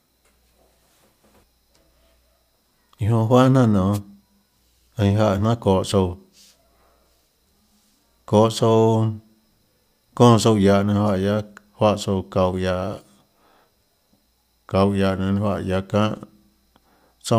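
A wireless microphone noise hit at 3.92 to 3.99 s interrupts the speech with a brief burst of static as the radio signal fades and receiver noise rises.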